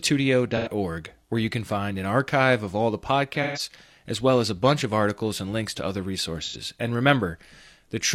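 AAC frame loss with concealment hits the speech three times: 0.56 to 0.68 s, 3.42 to 3.59 s after "archive of all the", and 6.41 to 6.56 s after "and links to other". Each gap, about 85 ms, 128 ms and 85 ms, is patched from the last good spectrum, leaving a brief smeared, phasey blur.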